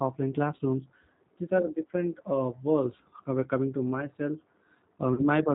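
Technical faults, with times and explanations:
Throughout: G.729 codec. The speech passes through a low-rate speech codec, consistent with 8 kbit/s G.729A, which rebuilds it from a vocal-tract filter and sparse pulses and passes nothing above 4 kHz. The result is plainly audible: dull, band-limited, rough and slightly synthetic.
0.57–0.60 s and 5.14–5.22 s: VoIP packet loss concealed by the speech codec. Audio went missing, about 20 ms and then about 40 ms, fitting one and then two lost packets. The decoder filled each gap by extending its last pitch and filter at falling gain, so the sound smears into a fading buzz or coloured noise and stays weak briefly afterward.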